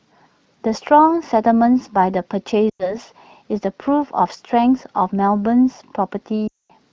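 Speech, carried over wideband AMR whose light coding fits a rate near 16 kbit/s. There are lost AMR speech frames at 2.69 to 2.96 s and 6.48 to 6.71 s. Radio errors corrupted them. The decoder stretched the last good frame with falling gain, so about 100 ms and then 220 ms of speech drop to near silence.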